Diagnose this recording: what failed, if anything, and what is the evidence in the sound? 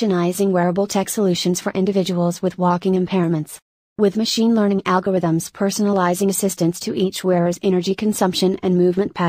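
No failure is audible at any stage, and nothing in the sound points to a fault in the wiring, conversion, buffering, transmission, storage or playback chain.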